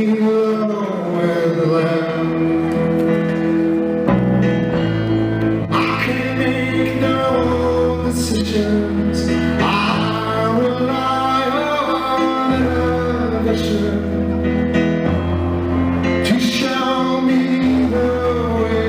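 No technical faults are audible.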